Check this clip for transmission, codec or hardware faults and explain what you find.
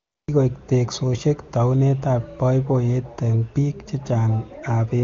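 One transmission fault is audible, at the very start of the clip.

AMR comfort noise, 0.0 to 0.27 s: the sending phone treated this opening stretch as silence and sent no speech frames, so the receiver generated synthetic noise from a rough level and spectrum description. The real background is replaced by a smooth, even hiss that gives way to the transmitted audio at 0.27 s.

The AMR wideband (HD Voice) coding of the speech shows at most faint codec colouring, which fits one of its higher bitrates.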